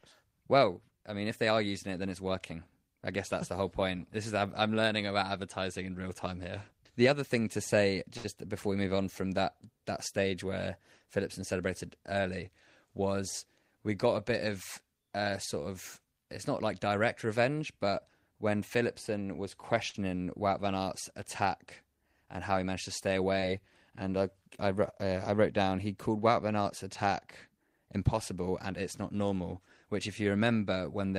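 At 8.17 to 8.26 s the speech hangs briefly. This is a short stall from a late packet. The jitter buffer ran dry, so the receiver held the last sound for 67 ms until the packet came. Nothing is lost. A sound just drags, with a faint buzz or dip.

From 12.86 to 13.23 s a jitter buffer speed-up occurs. Too much audio had built up. The receiver trimmed pitch-period slices to catch up, about 50 ms in total. Speech runs at 111% speed with unchanged pitch. It sounds hurried.

The same short stall recurs at 19.89 to 19.96 s, lasting 47 ms.

At 23.40 to 23.44 s there is a short concealed packet loss. About 20 ms never arrived in time. The receiver extended the preceding sound for 21 ms, then blended back into the real audio. The result is a brief smear or wobble.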